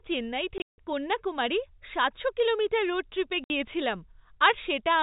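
Speech carried over a telephone-grade G.711 path, band-limited below 4 kHz, loses packets twice, and the receiver fills each gap with silence (packet loss filled with silence). From 0.58 to 0.77 s, about 180 ms goes missing across a 200 ms stretch, including a single 160 ms hole. At 3.44 to 3.50 s a further 60 ms drops out. The hole lengths fit 20 ms packets. Each gap chops the speech abruptly, with hard cuts into and out of silence.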